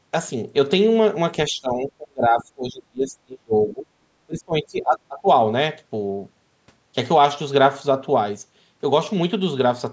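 Between 1.49 and 3.89 s, and again from 4.26 to 5.28 s, the speech dips and breaks up in pieces, falling by up to about 30 dB. The likely cause is speech suppressed in double talk: an echo canceller confused the talker with returning echo and turned both down.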